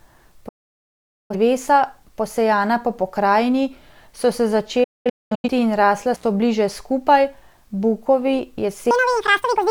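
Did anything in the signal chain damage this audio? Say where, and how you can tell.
Yes. Digital broadcast dropout at 0.48–1.35 s and 4.84–5.49 s (after "po pokrajini so se"). In the reception stage, corrupted frames muted the decoder, with 8 ms fades and scattered holes up to 210 ms.

Intermittent contact at 6.14–6.23 s, after "in rasla". A loose analogue connection opened for about 65 ms, leaving a crackle-edged gap before "so bliže skupaj".

Section at the wrong speed from 8.91 s to the end. The speech runs 1.97 times fast and sits roughly ten semitones high, likely from playback resampled at the wrong clock.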